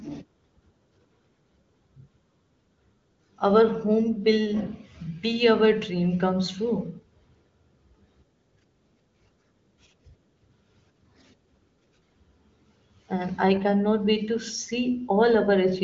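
No technical faults are present.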